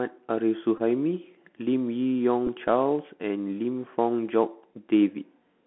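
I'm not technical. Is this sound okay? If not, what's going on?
No. The whole recording is squeezed through a Bluetooth CVSD headset codec: it sounds muffled like a phone call, with scratchy s sounds and a grainy hiss a plain phone line wouldn't add. There is also a Bluetooth headset packet repeated: at 0.78 to 0.81 s a short buzz replaces the speech, and at 2.47 s there is a brief tick. Both are repeated sound rather than a silent gap.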